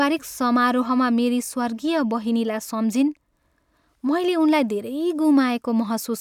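Nothing here jumps out as a technical fault; the speech runs along without any glitch worth flagging.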